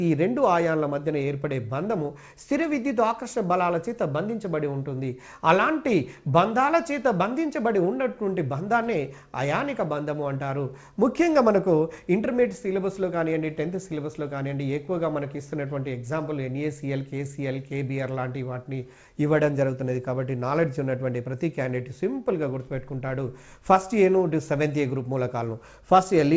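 No faults can be heard in the audio, which carries the ordinary traits of a wideband call path: its content stops at 8 kHz, consistent with G.722 coding at 64 kbps.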